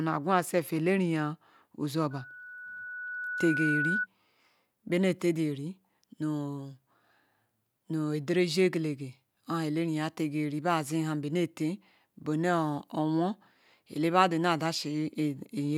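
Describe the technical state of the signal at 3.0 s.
At 3.0 s the signal is in the middle of a loudspeaker feedback squeal running from 2.11 to 4.07 s. The microphone is picking up the loudspeaker it drives, and at 1.5 kHz the loop gain exceeds unity, so that tone reinforces itself on every pass. It swells over about one and a half seconds into a steady whistle that reaches roughly the level of the speech.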